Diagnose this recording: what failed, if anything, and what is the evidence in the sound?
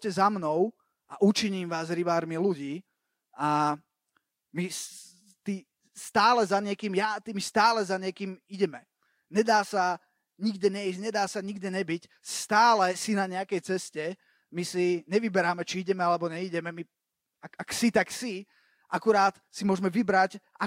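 Nothing failed: there is no evidence of a fault anywhere in the sound of this recording.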